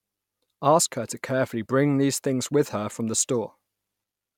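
Speech recording with no technical faults to report.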